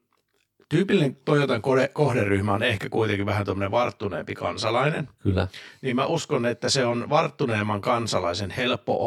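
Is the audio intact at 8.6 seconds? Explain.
No. At 8.6 seconds the speech carries channel delay (comb filtering), and the fault runs through the whole clip. One channel arrives about 20 ms after the other. When the two are summed to mono, energy they share cancels at evenly spaced frequencies. The first notch sits somewhere around 30 Hz, and more follow at regular steps up the spectrum. The result is a rough, slightly doubled sound.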